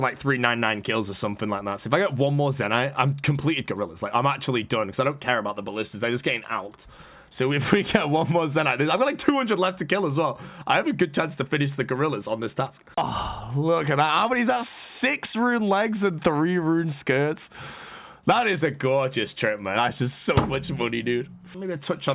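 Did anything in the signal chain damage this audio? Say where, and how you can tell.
No, nothing along the chain from capture to playback has left an audible mark on this audio.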